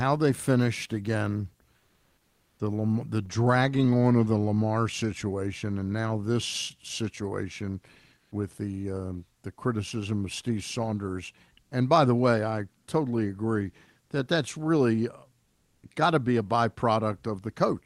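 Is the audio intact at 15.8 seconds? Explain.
No. From 15.43 to 15.83 s the real background is replaced by comfort noise: a steady, featureless hiss about 13 dB quieter than the surrounding ambience, lasting 0.4 s. The likely cause is discontinuous transmission in the Opus call codec. When the sender's voice detector judged the pause silent, it stopped sending audio, and the receiver filled the gap with synthetic noise shaped only loosely like the original background, so its detail disappears.

The same mechanism produces an onset clipped by the voice detector at 15.72 to 15.83 s. The detector was likely slow to register that sound had resumed, so the first 110 ms were never transmitted and comfort noise played in their place. When the audio returns at 15.83 s, it starts abruptly, without its soft beginning. The codec's usual band limit is around 12 kHz on either side of the gap.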